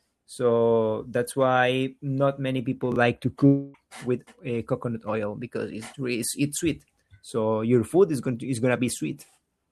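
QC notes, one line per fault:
2.92–2.96 s, chunks out of order: just after "why not many people", a 20 ms chunk landed one slot late, so three hard joins give a brief jumbled blip.
3.46–3.75 s, long network dropout: about 0.28 s of audio likely never arrived; the receiver smeared the last sound into a fading buzz, then speech resumes with that stretch missing.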